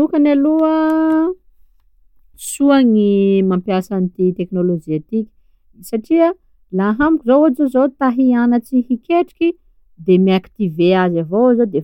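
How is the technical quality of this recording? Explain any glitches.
No glitches or faults are audible.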